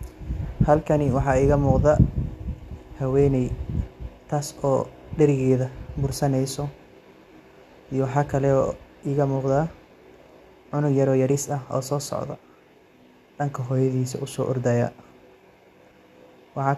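Nothing in this speech recording stands out as a technical problem; it's a straightforward listen with no faults to point to.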